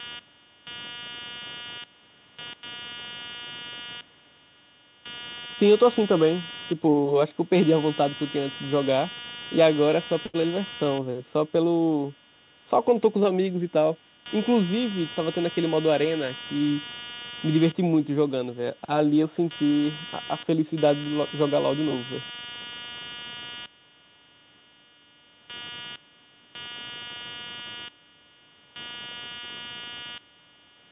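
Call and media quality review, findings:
Computer activity noise, throughout: a buzz pulsing at around 200 Hz, roughly 15 dB below the speech. Processor or peripheral load is disturbing the shared audio ground, so the buzz follows computer activity, not the speech.

Short stall from a late packet, 10.26–10.36 s: the sound is held for 78 ms. The jitter buffer ran dry and the last sound was stretched until the packet arrived. Nothing was lost.

Short concealed packet loss, 10.42–10.45 s: a brief smear where 60 ms of audio never arrived in time. The decoder extrapolated from the preceding sound and blended back into the real audio.

Jitter buffer slow-down, 10.46–10.85 s: playback runs at 88% speed with the pitch unchanged, adding 55 ms. Repeated pitch periods rebuild the buffer reserve after the underrun.

Jitter buffer speed-up, 13.58–14.26 s: a hurried stretch at 112% speed with the pitch unchanged, dropping around a tenth of a second. 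Pitch periods are cut to shed excess buffered delay. The band limit at 4 kHz fits a narrowband G.711 call path.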